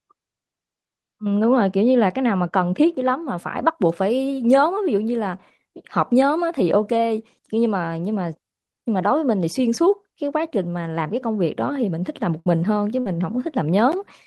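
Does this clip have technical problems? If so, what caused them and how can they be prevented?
Yes. From 0 to 3.22 s the speech sounds dull and muffled because de-emphasis was applied wrongly. A treble cut ran where no pre-emphasis needed undoing, or was applied twice, so the highs slope down to about 11 dB lower at 10 kHz than at 1 kHz. Match de-emphasis to the actual pre-emphasis setting on both ends.

There are two bursts of packet loss, at 12.39 to 12.48 s and 13.00 to 13.08 s. Each time the receiver stretches the last sound for about 60 ms, fading it into a held buzz or hiss, and then jumps ahead past roughly 60 ms of missing audio. A larger jitter buffer or forward error correction would cover gaps like these.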